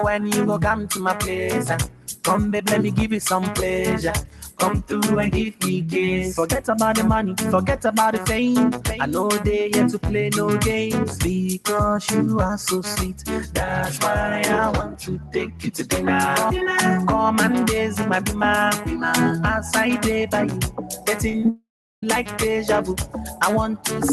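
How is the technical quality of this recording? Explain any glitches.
The recording has clear technical problems. A speech-style noise suppressor works on non-speech audio throughout, and a network failure breaks the sound near the end. The sound passes through a call codec, and its top end stops near 12 kHz.

A noise suppressor applied to music or sounds stays active the whole time. It treats steady tones and tails as noise. Held sound drops while attacks survive. The level swings by about 5 dB, so the sound pumps and thins.

There are eight places where the sound is cut by the noise suppressor: 0.77–1.05 s, 1.91–2.23 s, 4.27–4.59 s, 13.09–13.28 s, 14.84–15.71 s, 20.51–21.06 s, 22.23–22.38 s and 22.87–23.41 s. The suppressor clamps these stretches harder, by about 6 to 10 dB. Sustained parts sink and decays end early.

From 21.29 to 21.48 s there is repeated packet loss, giving a robotic sound. 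Five brief holes occur, the longest 20 ms. Each is patched by extending the previous sound. About a third of this span is filler, so the audio turns choppy.

A long network dropout likely follows from 21.49 to 22.03 s. The last sound is stretched into a fading buzz or hiss. Then roughly a third of a second of silence follows. The audio resumes afterwards, and about half a second of material is gone.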